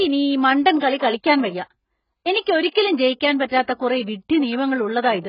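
From start to finish the speech has nothing above 5.1 kHz and sounds dull, smeared and warbly, with fizzy sibilants. This is likely AAC compression, with heavy codec damage that fits AAC-LC at around 12 kbps, where the encoder drops the top band and coarsely quantises the rest.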